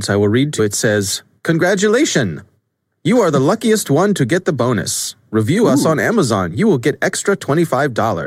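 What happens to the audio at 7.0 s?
Nothing goes wrong at 7.0 s; the speech carries on intact through that moment.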